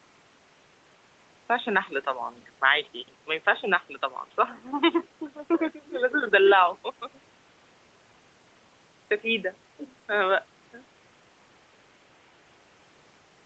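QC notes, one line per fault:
No faults: faint room noise sits about 36 dB under the speech, and the band stops at 8 kHz, which fits a wideband call path.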